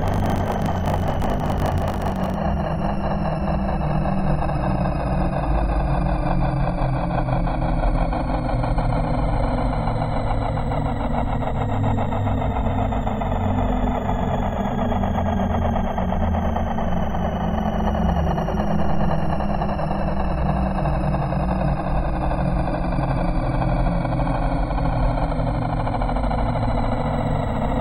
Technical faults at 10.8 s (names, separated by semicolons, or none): none